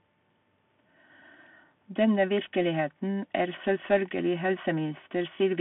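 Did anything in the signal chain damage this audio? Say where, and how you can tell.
Yes, at the codec stage, for the whole clip. The speech sounds narrow and boxed-in, with nothing above about 3.8 kHz and a band running roughly 150 Hz to 3.4 kHz. A granular hiss sits beneath it, and s sounds come out scratchy. That is the Bluetooth CVSD headset codec. Its one-bit up-or-down steps, at a rate that fits 64 kbit/s, can't keep pace with loud high-frequency energy, so the adaptive step lags and distorts plainly audibly.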